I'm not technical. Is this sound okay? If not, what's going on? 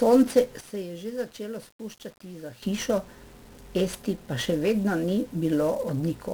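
No. The whole recording has 1-bit DFPWM compression damage. It's a very crude way of storing sound, so the speech sounds fuzzy and crackly, with hiss covering the crisp upper sounds. Unlike ordinary background hiss, this roughness is tied to the speech itself and never goes away.

There is also a sudden gain jump. At 0.61 seconds the whole sound, speech and background alike, abruptly gets much quieter, then snaps back at 2.62 seconds. A fade would slide down gradually. This is instant, likely from a volume setting applied with no smoothing.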